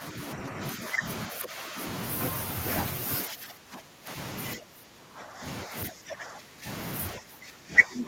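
The speech sinks in level four times: from the start to 1.8 s, 3.26 to 4.09 s, 4.55 to 6.66 s, and 7.17 s to the end. The dips run from roughly 10 dB to about 20 dB, deepest in the third stretch. This is speech suppressed in double talk. The likely cause is an echo canceller that cannot tell the near talker from far-end echo while both sides speak, so it attenuates everything and the speech drops away.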